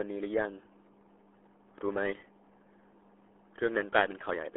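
From start to finish the speech carries RealAudio 14.4 codec damage, and it's heavy: everything above about 3.8 kHz is gone, the band squeezes to roughly 300 Hz to 3.4 kHz, and the gargly, muffled texture fits an 8 kbit/s dial-up-era stream.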